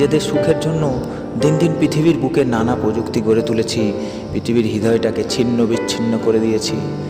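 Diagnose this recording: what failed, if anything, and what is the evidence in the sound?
No fault can be heard.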